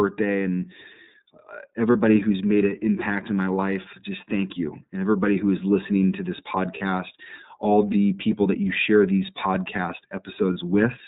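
Speech throughout with a narrowband, slightly rough and synthetic quality: nothing above 4 kHz comes through, and the damage is plainly audible. This is the iLBC codec, which codes each frame's excitation independently and discards the upper band. The character fits its 30 ms frame mode at about 13.33 kbps. Three brief moments sound like a held, faintly buzzy vowel sound: 1.92 to 1.96 s, just before "who's made an impact"; 6.77 to 6.82 s, right after "is listening to this"; and 10.53 to 10.56 s, just after "you share these podcast". Each gap lasts about 30 ms, consistent with a single lost iLBC frame. The decoder covers the gap by repeating the last pitch cycle mixed with noise. Because iLBC frames stand alone, the speech snaps back cleanly right after each gap.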